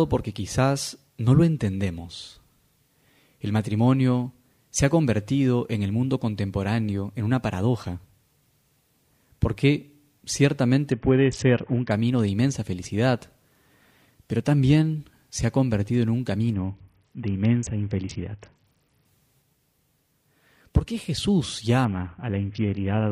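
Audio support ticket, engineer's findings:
Bluetooth SBC bit pool drop at 10.92–11.91 s, 16.54–19.05 s and 21.85 s to the end. Treble dulls and gritty noise rises, which fits the link cutting the bit pool from 31 to 6 (about 55 kbps). Unlike a dropout, the sound keeps flowing and full quality returns after the first two.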